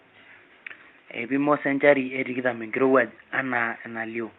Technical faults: none

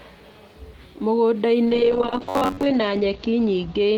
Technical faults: call bitrate drop; robotic sound from repeated short buffers

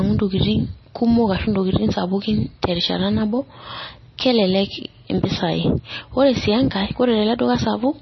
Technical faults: MP3 compression

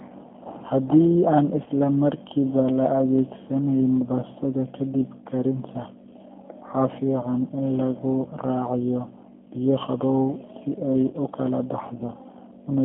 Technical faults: G.729 codec; VoIP packet loss concealed by the speech codec

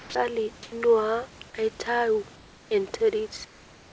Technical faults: sound dropped by the voice detector; comfort noise in place of the background

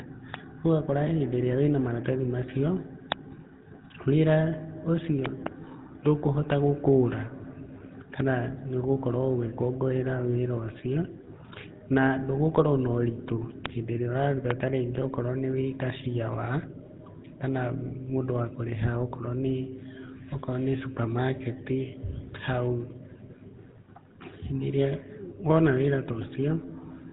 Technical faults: GSM full-rate codec; loud pop

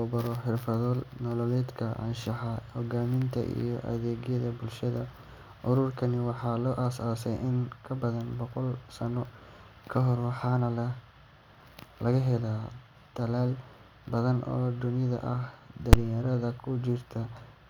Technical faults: invalid numbers at full scale

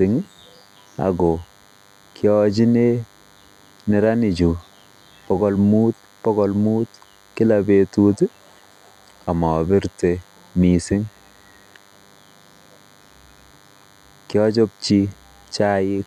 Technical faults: DECT cordless phone buzz

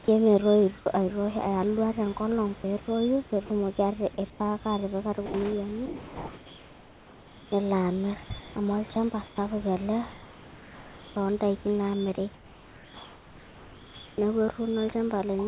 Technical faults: sound chopped by the voice detector; sound dropped by the voice detector; comfort noise in place of the background; onset clipped by the voice detector

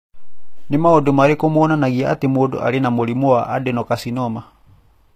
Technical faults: HE-AAC compression

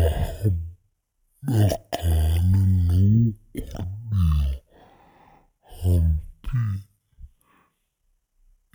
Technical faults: stereo read as mono

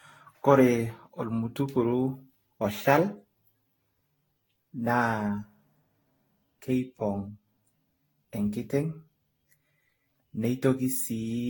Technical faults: generation loss

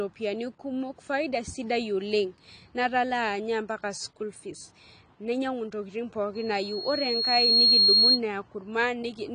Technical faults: AAC compression; loudspeaker feedback squeal

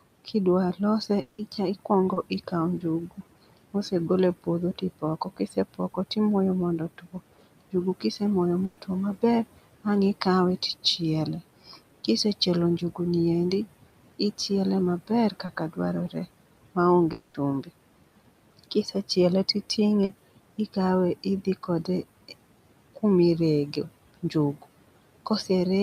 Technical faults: noise suppressor artifacts; speech cut by the noise suppressor; long network dropout; short concealed packet loss; burst of packet loss

